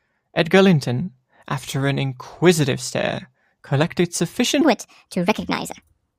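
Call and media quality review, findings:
Section at the wrong speed, 4.61 s to the end at 6.18 s. Speech jumps to 1.4x, pitch up about five semitones, hurried and chipmunky. Likely a resampler or playout stage running that tail against the wrong clock.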